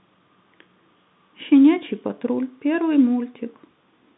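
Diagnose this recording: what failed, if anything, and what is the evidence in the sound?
Nothing has failed here; the speech simply carries the expected character of G.711 telephone coding, confined to a line band of about 150 Hz to 3.7 kHz, with no more than a faint trace of the codec's own coding noise.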